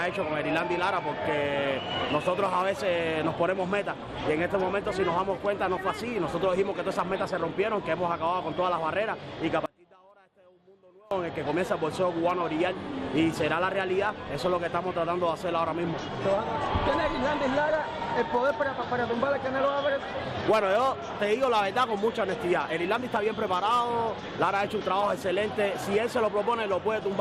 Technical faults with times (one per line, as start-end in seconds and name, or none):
9.66-11.11 one channel inverted